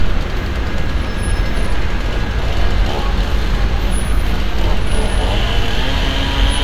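No technical faults can be heard anywhere in this recording.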